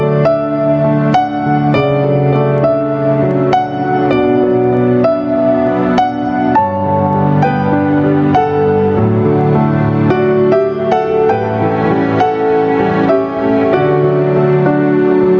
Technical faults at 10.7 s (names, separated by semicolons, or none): gain pumping